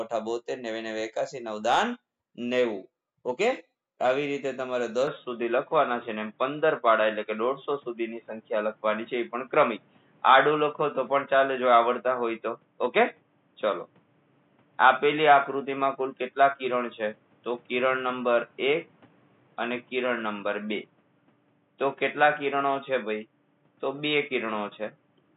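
At 5.07 s the audio turns abruptly dull and boxy, with no gap, and stays so to the end: nothing above 3.8 kHz, a level shift of roughly 5 dB, and new background noise around 40 dB down, likely from the input switching to a poorer device.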